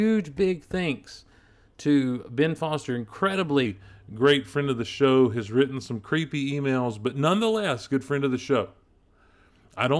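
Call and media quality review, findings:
Wrong sample rate from 3.66 s to end: speech drops about 1.5 semitones and slows to 0.92x. Playback clock runs low, fitting 24 kHz audio played at 22 kHz without resampling.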